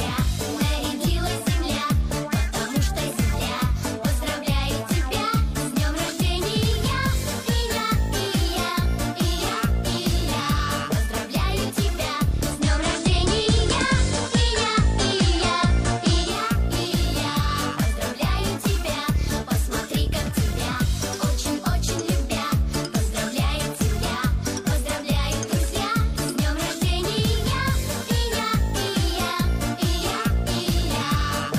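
At 12.51 s the receiver drops its digital stream and blends over to the FM broadcast of the same station, a classic digital radio blending to analogue, with the crossfade taking about 181 ms. You'll hear the level shift by about 3 dB, and a bed of hiss come up, roughly 30 dB under the signal. At 16.39 s it blends back to digital and both go away.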